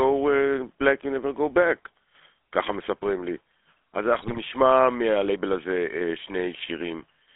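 Speech carried through the GSM full-rate codec from start to finish, band-limited to roughly 300 Hz to 3.4 kHz. Its coarse excitation model adds a plainly audible buzzy, gravelly roughness, which fits the 13 kbps rate. From 4.2 to 4.39 s, GSM bit errors corrupt the decoder's parameters. The sound squawks and gargles across several consecutive frames.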